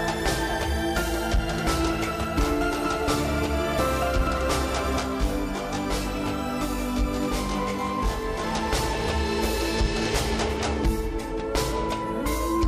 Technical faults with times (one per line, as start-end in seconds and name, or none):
5.00-8.44 channel delay (comb filtering)